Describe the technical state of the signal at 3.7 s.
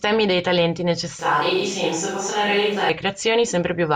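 At 3.7 s the speech signal is intact, with no audible dropout, distortion or other fault.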